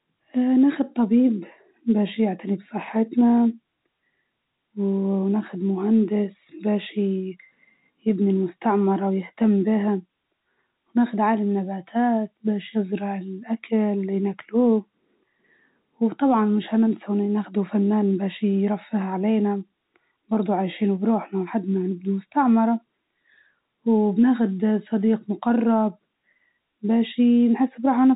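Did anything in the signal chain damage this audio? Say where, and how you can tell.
No, nothing in the chain has damaged this speech. It has passed through G.711 telephone coding, which can be heard as nothing above about 3.8 kHz and at most a faint level-following hiss, as expected from A-law telephone audio at 64 kbps.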